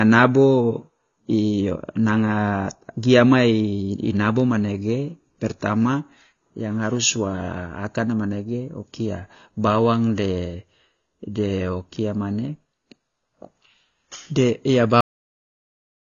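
AAC compression runs through the whole speech clip: nothing sounds above about 6.9 kHz, and the voice has a dull, smeared quality with a watery, fizzy edge on sibilants. The likely cause is AAC-LC coding at a bitrate near 24 kbps, which drops high frequencies and leaves holes between bands.

A cut-off end comes at 15.01 s, just after "de ya". The sound stops mid-syllable and falls straight to digital silence with no natural decay, because the final stretch of audio was never written out or played back.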